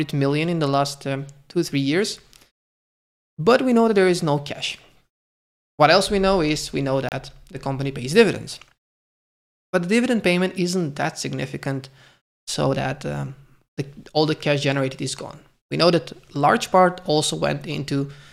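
At 7.09 s the audio drops into a silent hole that lasts until 7.12 s, a digital broadcast dropout. The receiver could not decode a good frame, whether through signal loss or a failed checksum, and muted until valid frames resumed. The gap fits a single lost frame of about 32 ms. Unlike concealed packet loss, nothing fills the gap, and unlike an edit, the sound picks up further along in time because that stretch was never received.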